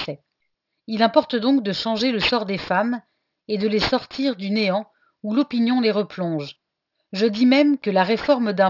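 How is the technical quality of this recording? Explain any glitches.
The recording has a clear fault that runs from start to finish. Sibilants and other bright consonants sound gritty and metallic throughout, and the spectrum stops hard at 6 kHz. This is aliasing. High-frequency energy was folded back below 6 kHz without anti-alias filtering, which fits a downsample to a 12 kHz rate. The folded tones sit at unrelated pitches, roughly 15 dB below the speech.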